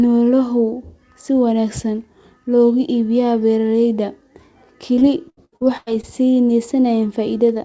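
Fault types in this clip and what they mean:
repeated packet loss (robotic sound): from 4.96 to 6.05 s lost packets leave a quick run of holes up to 97 ms long, each filled by extending the previous sound, so about a third of that stretch turns choppy and robotic, unlike one isolated dropout.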